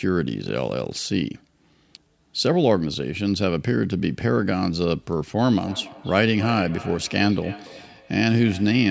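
Feedback echo between two devices on one call, from 5.57 s to the end: speech returns roughly every 300 ms, about 17 dB down, ringing.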